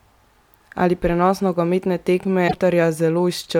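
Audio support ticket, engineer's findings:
Brief glitch at 2.44–2.54 s, right after "prenos nogometne". Damaged data in the compressed stream: decoder misreads corrupted frames, loses sync, resyncs at the next header.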